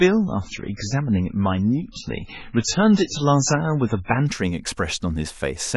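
From the start until 4.27 s the speech sounds dull and smeared, with nothing above 7.6 kHz and heavy codec artefacts, then clears abruptly without a gap. This is an adaptive stream starting at a low bitrate, consistent with very low-rate MP3, before the player stepped up.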